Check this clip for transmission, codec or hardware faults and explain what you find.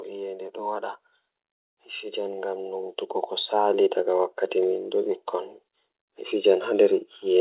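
One fault stands out: automatic gain rising. From 1.66 to 2.97 s the speech and the background noise swell together by about 4 dB over more than a second. The gain control judged the input too quiet and raised its gain, lifting everything at once rather than the voice alone. The band-limited sound, with nothing above 4 kHz, points to a G.711 mu-law call path at 64 kbps.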